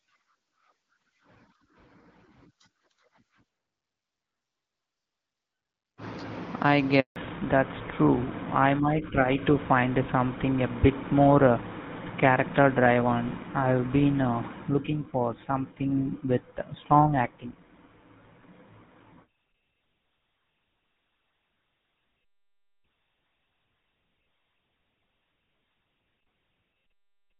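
At 7.00 s the speech dies away for 160 ms, until 7.16 s. This is a handover gap. The call switched networks and no speech frames got through during the change. The sound fades within a few tens of milliseconds, then silence. That stretch of speech is lost.

From 7.16 s to the end, there is a fallback to narrowband. Before the gap, the light HD Voice coding fits AMR-WB at about 12.65 kbit/s. Afterwards nothing sounds above 4 kHz. The voice turns duller and rougher, which fits GSM full rate.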